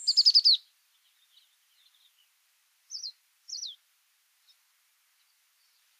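No technical faults are audible.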